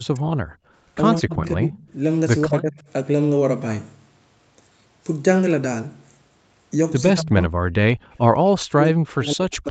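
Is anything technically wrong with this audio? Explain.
Yes. The speech dips sharply or breaks into fragments at 0.0–0.25 s, 1.19–1.95 s, 2.47–2.82 s, 7.16–7.58 s and from 8.59 s to the end, falling by roughly 25 to 40 dB. This is likely speech suppressed in double talk: with both ends talking, the echo canceller mistook this talker for loudspeaker echo and turned everything down.

The room sound also drops out briefly, by about 40 dB, at 0.53–0.73 s and 7.97–8.10 s, then returns. This is background gated by the echo canceller: while the loudspeaker played, it clamped the microphone hard and then released it. The audio's band ends at 8 kHz, as expected from call microphone processing.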